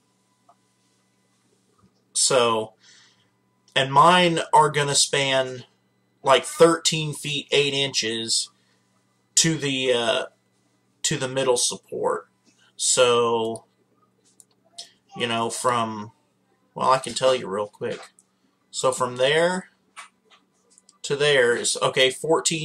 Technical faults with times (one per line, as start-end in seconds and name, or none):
5.11 overlap between stream segments
11.11 overlap between stream segments
17.10 overlap between stream segments